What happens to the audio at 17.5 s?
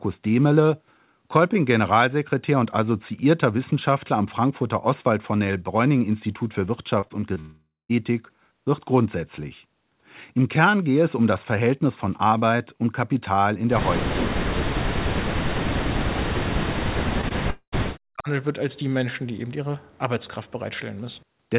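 At 17.5 s there is a long network dropout, from 17.50 to 17.74 s. The receiver likely stopped getting packets and filled the gap by stretching the last sound into a fading buzz, then about 70 ms of silence. Roughly 0.22 s of speech is lost for good.

This sits inside a longer stretch of speech suppressed in double talk, from 15.07 to 18.29 s. The level dips, by as much as about 40 dB, likely because an echo canceller mistook the talker for loudspeaker echo while both sides spoke.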